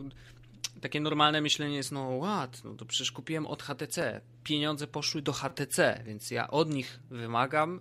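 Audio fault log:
4.02 s, repeated buffer: a single click right after "to przecież kupiłem od", as one 5.8 ms piece of audio plays twice, which fits a 256-sample buffer arriving late.
5.49–5.51 s, repeated buffer: a brief buzz between "poszły do" and "więc ja od", as the same 5.8 ms piece replays four extra times with hard joins.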